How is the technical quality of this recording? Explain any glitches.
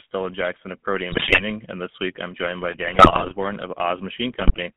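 Quality's pretty rough: the whole clip is phone-grade audio with codec grit, and it's broken up by three bursts of decoder garbage.

The GSM full-rate codec runs the entire time. The band sits at roughly 150 Hz to 3.4 kHz, which fits the 13 kbps full-rate coder. It rebuilds the voice from a vocal-tract filter fed by sparse, regularly spaced pulses, so speech comes out buzzy and gravelly.

There are GSM bit errors at 1.12–1.42 s, just before "and this week I'm", at 2.72–3.33 s, right after "week I'm joined by", and at 4.40–4.58 s. Corrupted filter, pitch and gain values across several consecutive frames warp the spectrum and spike the level, so you hear squawks, pops and gargling. The middle burst is the longest.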